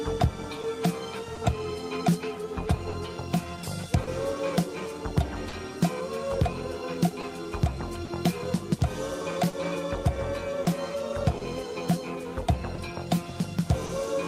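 The audio has clock drift between sender and receiver running the whole way through: the sending end's clock is roughly 2% slow, so the receiver's jitter buffer keeps draining and has to stretch or repeat tiny slices, giving small, unevenly spaced timing hiccups. On top of that there are scattered short gaps between about 0.61 and 13.91 s, around ten lost or late packets patched by carrying the previous sound forward. That's roughly a third of a second filled in total, none longer than about 40 ms, heard as brief ticks and smears.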